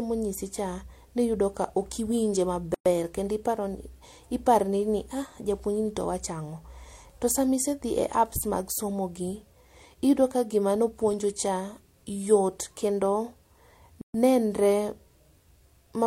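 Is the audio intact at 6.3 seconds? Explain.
Yes, at 6.3 seconds the speech runs on without any audible dropout, click, distortion or other fault.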